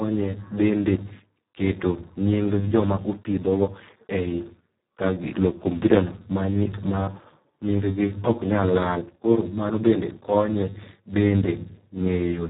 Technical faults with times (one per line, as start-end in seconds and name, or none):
0.00-12.49 Speex codec